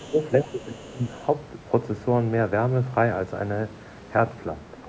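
From 0.0 to 0.25 s a faint second voice sits under the speech, roughly 25 dB down. This is the other side's voice leaking through, most likely loudspeaker echo that the canceller did not fully subtract from the microphone signal. It returns from 0.42 to 1.26 s, weaker still at around 30 dB below the talker.

Overlapping this, from 0.11 to 1.14 s, the talker's own level dips in patches totalling about half a second, falling by roughly 15 dB at the deepest point. The same happens from 4.63 to 4.88 s, where the drop reaches about 20 dB over some 200 ms. Both are speech suppressed in double talk, with the likely cause being that the echo canceller could not separate near-end speech from the echo and attenuated everything, so the voice sounds ducked. The band tops out at 8 kHz, consistent with the call's microphone processing.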